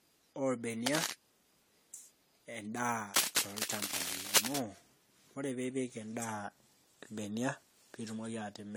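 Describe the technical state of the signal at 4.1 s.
At 4.1 s there is cable scratch noise, from 3.14 to 4.58 s. Dense, uneven scratching sits over the speech, about 5 dB louder. A worn connector moving under load is the likely cause. Generation loss is also present throughout. The speech sounds swirly, hollow and smeared, with blurred attacks. This points to repeated AAC-LC re-encoding at 64 kbit/s, around seven passes.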